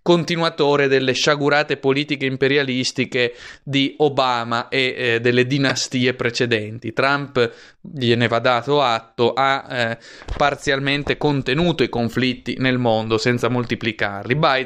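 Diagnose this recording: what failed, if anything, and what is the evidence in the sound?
At the codec or storage stage, repeated frames were written or delivered twice, so the decoder played the same stretch of compressed speech a second time. Just after "delle sciagurate politiche imperialistiche", at 3.46 to 3.49 s, and after "eh delle", at 5.68 to 5.71 s, a 26.1 ms block replays once. That length fits a single MP3-style frame. Each repeat is heard as a brief stutter, and each adds 26.1 ms to the recording.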